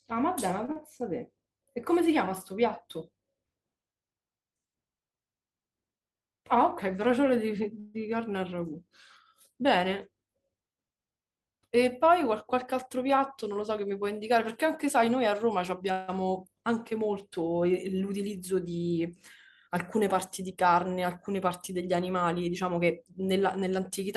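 At 0.65 to 0.70 s there is a short stall from a late packet. A packet missed its playout time, the jitter buffer ran dry, and the receiver held the last sound for about 24 ms until the data arrived, then resumed from the same point. Nothing is lost, but the sound hangs slightly too long with a faint buzz or dip, and the playout delay grows by the same 24 ms.

Immediately after, from 0.72 to 0.77 s, comes a short concealed packet loss. About 40 ms of audio never reached the decoder, and roughly 35 ms of synthetic continuation, extrapolated from the preceding pitch or shaped noise, was blended in to cover the hole. It comes across as a brief smear or wobble, and a short consonant in that span can drop out entirely.

From 7.80 to 7.96 s the audio freezes for about 143 ms, a call audio freeze. The last sound is stretched into a fading buzz or hiss with no true silence, then speech picks up exactly where it stopped. 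Nothing is missing, but a pause has been inserted. The likely cause is packets held up in transit, which left the jitter buffer empty.

Between 12.20 and 15.81 s there is a jitter buffer speed-up. The buffer was holding more audio than its target, so the receiver trimmed short pitch-period chunks repeatedly, removing roughly a seventh of a second in total. Speech runs at about 104% speed without any change in pitch.

A second call audio freeze follows at 15.92 to 16.10 s, lasting about 165 ms. Again the last sound is drawn out as a decaying buzz or hiss, with no drop to silence, before the audio resumes intact, most likely because delayed packets drained the buffer.

From 21.95 to 24.04 s the receiver speeds up again, to about 105%, cutting roughly a tenth of a second to shed the extra delay. The speech sounds rushed at an unchanged pitch.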